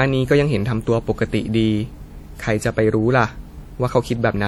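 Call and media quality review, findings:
WMA compression, throughout the speech. Symptom: ringing, washy smear, with a hiss that swells and fades with the signal. Component: likely a WMA transform encoder with long blocks. Damage plainly audible, which fits a stream of around 48 kbps. Mechanism: quantisation noise spreads over tens of milliseconds per block, and weak spectral lines are zeroed. Distinct from low-pass band-limiting: content still reaches about 20.1 kHz, so the damage is smearing and breathing noise, not lost top end.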